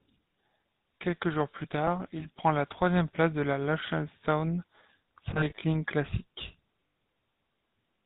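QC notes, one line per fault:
throughout: converter idle tones. The delta-sigma converter is running without dither, so at low input levels its bit stream settles into repeating patterns that produce a steady tone instead of random noise. Here that tone sits at around 7 kHz, at about -27 dB relative to the signal. It is heard as a thin whistle in the pauses and as a grainy texture under the quieter stretches of speech.
throughout: GSM full-rate codec. The speech has passed through the original GSM coder, which fits a 13 kbps full-rate stream. That coder rebuilds the voice from a vocal-tract model driven by a sparse, regularly spaced pulse excitation, and it discards everything above 4 kHz. The result is plainly audible damage: a muffled top end with a buzzy, gravelly roughness.
2.20–2.25 s, 5.34–5.63 s, 6.88–6.96 s: lost GSM frames. At each point the decoder received bad frames and replaced them by repeating the last good frame's parameters. 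The shortest gap is about 20 ms, between "jours plus tard" and "prend la troisième place", and it is heard as a brief metallic smear. Around 5.34 s about 140 ms is lost, scattered across roughly 280 ms with runs of up to around 40 ms, which gives a stuttering, ringing patch. At 6.88 s an 80 ms loss is held as a rough, metallic ring.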